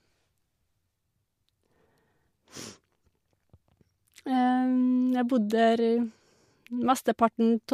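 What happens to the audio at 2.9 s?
Nothing goes wrong at 2.9 s; the speech carries on cleanly through that moment with no dropout, click or distortion.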